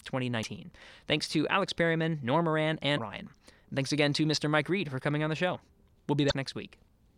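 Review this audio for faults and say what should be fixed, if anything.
Damaged data in a compressed stream shows up as three short glitches at 0.42–0.45 s, 2.97–2.99 s and 6.28–6.33 s, where the decoder hits corrupted frames and resyncs. Verify transfers with checksums and keep metadata out of the audio stream.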